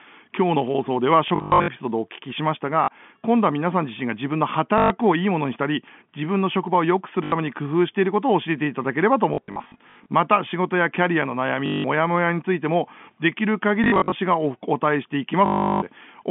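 Short robotic stutters with a 50 Hz buzz break into the telephone-band speech at 1.28–1.68 s, 2.84–2.88 s, 4.78–4.9 s, 7.24–7.32 s, 9.34–10.06 s, 11.66–11.84 s, 13.84–14.12 s and 15.46–15.82 s. This is packet loss with the last packet repeated. The receiver replays the last 20 ms chunk to fill gaps lasting from 40 ms to 360 ms. The replays seldom line up with the pitch.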